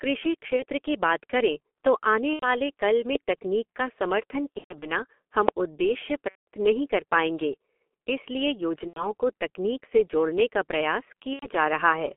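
Speech runs through the G.723.1 codec for the whole clip. Its band spans only 250 Hz to 3.4 kHz, and the sound points to the 6.3 kbit/s rate. The voice is muffled and hoarse, consonants smear, and the slow-updating voice model leaves heavy coding damage. VoIP packet loss concealed by the speech codec breaks in six times: 0.56, 2.33, 4.52, 6.30, 8.87 and 11.34 s. Each gap is bridged with a fading extension of the previous sound, lasting 30 ms up to 180 ms. The gap at 4.52 s is scattered over 300 ms. The first lands just before "की बात". Another sits between "नहीं कर पाएंगे इसलिए" and "को तकनीक से जोड़ने". The last follows "से जोड़ने का प्रयास". A single loud pop hits at 5.49 s, roughly 25 dB above the speech, which carries on underneath. A voltage spike from a plug, switch or static discharge is the likely cause.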